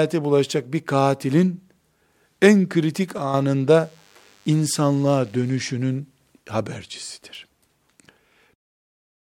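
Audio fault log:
3.18 to 3.34 s, sudden gain jump: the level of the speech and the background noise drops together by about 6 dB, stepping down rather than sliding. The likely cause is a digital gain change applied from one sample to the next with no ramp, so nothing smooths the transition. On the waveform the envelope shows a hard step in height across this stretch. On a spectrogram every frequency band darkens at once, including the noise floor.
3.72 to 5.72 s, DECT cordless phone buzz: a thin, steady buzz sits faintly under the speech, roughly 40 dB below it, for two seconds. A nearby cordless handset or base sends a radio burst every 10 ms, and the audio circuit rectifies each burst, producing a 100 Hz tone rich in harmonics. A spectrogram shows a comb of evenly spaced horizontal lines at multiples of 100 Hz. The waveform, zoomed in, shows small spikes repeating every 10 ms.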